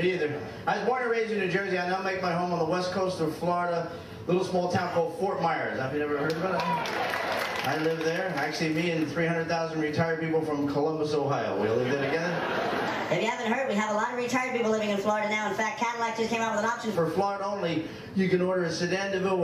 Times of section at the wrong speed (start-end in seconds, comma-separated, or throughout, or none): 12.88-16.95